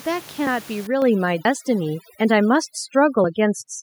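At 0.47 s the speech jumps forward slightly, a few tens of milliseconds gone with no gap. This is likely a dropped buffer (overrun): the hardware overwrote samples the software hadn't collected, and the two sides were joined directly. From 0.87 s to the end, the room noise, which sat about 16 dB under the voice, collapses into near silence flecked with twinkling specks. That is overdone noise removal, shutting down individual frequency bands near its noise estimate and taking quiet parts of the speech along with them. At 1.02 s voice and background rise together by about 5 dB in a single step. The microphone volume was stepped up by the call software raising the input level. Further skips follow at 1.45 s, a longer one of roughly a tenth of a second, and at 3.24 s, a short one, each a jump.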